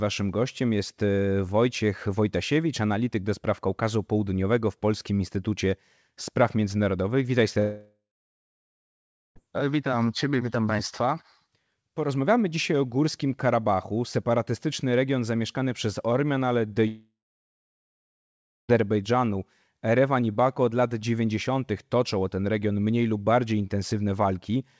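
Twice the stream likely suffered a long network dropout, from 7.60 to 9.38 s and from 16.88 to 18.71 s. Each time the receiver stretches the last sound into a short fading buzz, then roughly 1.3 s and 1.5 s of silence before the speech resumes with that stretch lost.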